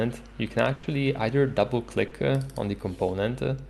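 From 0.73 to 0.85 s the sound stops moving forward and smears into a held, fading continuation of whatever came just before, then picks up again with a small piece clearly skipped. This is a burst of packet loss: roughly a tenth of a second of the stream arrived too late or not at all, and the receiver filled about 100 ms by stretching the last sound and turning it down. When real audio returned, about 100 ms of material had been lost.

At 2.07 to 2.13 s there is a much briefer blur, a quick wobble where the sound seems to hang for an instant before blending back. This is short concealed packet loss. About 40 ms never reached the decoder in time, and the receiver patched it by extending the preceding sound and blending into the real signal. That 40 ms of the original is gone. The surrounding call audio has a top end that stops near 12 kHz, which fits an Opus path in super-wideband mode.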